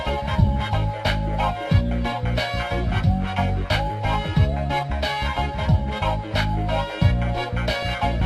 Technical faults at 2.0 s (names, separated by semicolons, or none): MP2 compression